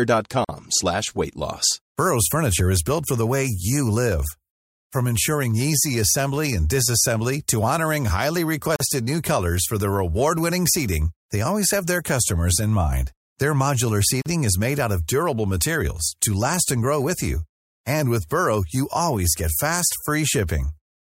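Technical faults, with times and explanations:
0.45–0.49 s, 8.76–8.80 s and 14.22–14.26 s: gap at a join of encoded pieces. Each is a silence of about 43–44 ms, the first just before "slash weight loss", the second between "disassembly to honoring highly" and "new colors for". Separately encoded pieces were butted together untrimmed, so encoder start delay and final-frame padding remain. Unlike a dropout, the speech resumes exactly where it stopped, with nothing missing, and the near-identical lengths and codec-smeared edges point to encoder padding rather than lost data.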